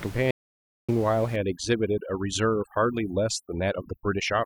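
At 0.31 s the input was likely lost while the recorder kept writing silence, an audio dropout to silence: the speech cuts off for 0.58 s into dead, toneless silence until 0.89 s. From 1.36 s to the end, overdone noise removal pulls bands near the noise estimate far down, so the room noise, heard about 19 dB below the speech, collapses into twinkling specks.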